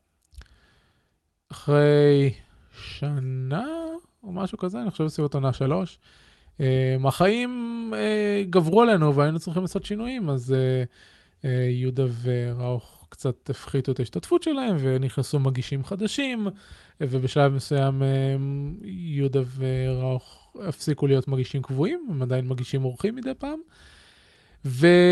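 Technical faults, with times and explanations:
The speech comes over the call path as a steady, continuous signal, with its top end stopping at about 12 kHz, which fits the ordinary band limit of a call codec.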